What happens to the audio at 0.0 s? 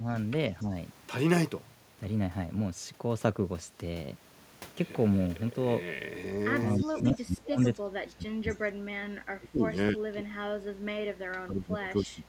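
Speech suppressed in double talk from 0.00 to 0.06 s: the speech briefly dips by a few decibels, likely because an echo canceller turned it down while the far side also spoke.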